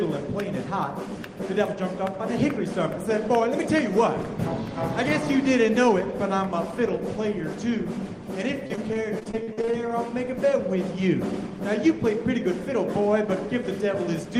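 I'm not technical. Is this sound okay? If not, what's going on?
No. Repeated packet loss (robotic sound) from 8.67 to 9.91 s: many brief dropouts, each patched by stretching the last sound, give a choppy, robotic stutter.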